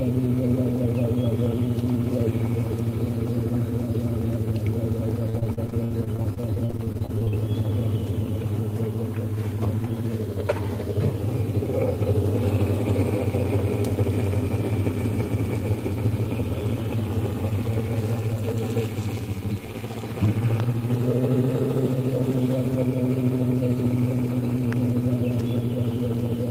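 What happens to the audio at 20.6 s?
A single loud pop lands there, from 20.6 to 20.62 s, standing roughly 10 dB above the surrounding sound, which carries straight on underneath. That's the signature of a sudden voltage step or spike, likely from a plug, switch, static discharge or driver glitch.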